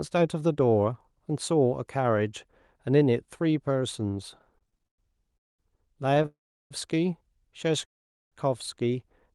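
From 4.31 to 6.26 s the speech has repeated stalls (stutter): about 20 brief gaps, the longest 115 ms, adding roughly a third of a second in total. Packets kept arriving late, the jitter buffer ran dry each time, and the receiver stretched the last sound before continuing. The speech drags and stammers but nothing is lost.

Call audio freezes occur at 5.37–5.61 s, 6.26–6.73 s and 7.85–8.34 s, lasting about 0.2, 0.45 and 0.47 s. Each is mostly silence before the speech resumes exactly where it stopped. The likely cause is packets held up in transit, emptying the jitter buffer.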